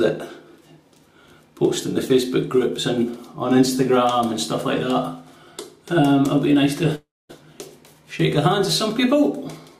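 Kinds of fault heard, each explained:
Long network dropout: from 6.95 to 7.31 s, about 340 ms of audio is likely lost in transit. The last sound is stretched into a fading buzz, then roughly 240 ms of near-silence follows before the sound resumes with that stretch missing.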